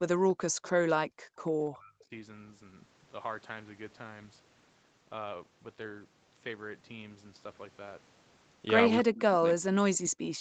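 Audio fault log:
0.00–0.27, 0.72–0.84, 1.04–1.37, 1.66–2.12 s, speech suppressed in double talk: the sound dips sharply and partly cuts out in short pieces, falling by as much as 40 dB, and less deeply, around 25 dB, in the last stretch. It likely comes from an echo canceller that heard both sides talking at once, could not tell its own talker from the loudspeaker echo, and turned everything down while the far side spoke.
0.64–0.70 and 1.36–1.48 s, echo leak: faint scraps of a delayed copy of the sound return 294 ms after the original, roughly 25 to 30 dB below the main level, so they register as a ghost rather than a clear repeat. The likely cause is a loudspeaker on one side whose echo canceller left part of its microphone pickup in place and sent that residue back down the call.
9.02–9.43 and 9.61–10.03 s, speech suppressed in double talk: two more stretches where the sound sinks by about 40 dB and breaks up, each lasting a few hundred milliseconds. 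As at the start, this is likely the echo canceller clamping down during simultaneous talk.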